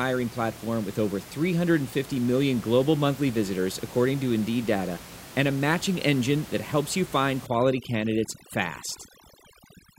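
From 7.47 s to the end, after "that helps you find", overdone noise removal sets in: bands near the estimated noise floor are cut to nothing, so the room noise, about 18 dB below the speech, drops and breaks up into twinkling specks. Unlike a noise gate, it removes separate frequency bands rather than muting everything at once.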